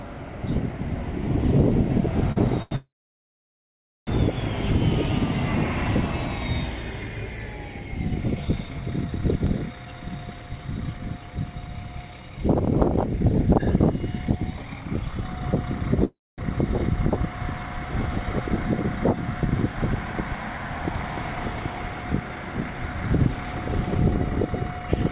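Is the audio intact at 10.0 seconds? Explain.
No. At 10.0 seconds the audio is inside a jitter buffer speed-up running from 9.85 to 12.38 s. The receiver trims short pitch-period pieces repeatedly to drain excess buffered audio, about 200 ms in all, so playback runs at 109% speed with unchanged pitch and sounds hurried.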